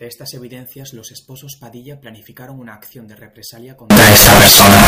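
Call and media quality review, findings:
Signed and unsigned mixed up, 3.90 s to end. Very loud harsh distortion. Quiet parts as loud as peaks. Likely sample-format mismatch in decoder or capture path, fits 16-bit data. Top bit flipped; each zero crossing jumps full range.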